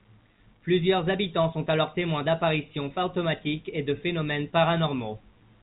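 Nothing here stands out as a fault: the speech simply carries the narrow, telephone-like band you'd expect from a call path, with nothing above about 4 kHz, which fits a G.711 mu-law codec at 64 kbps.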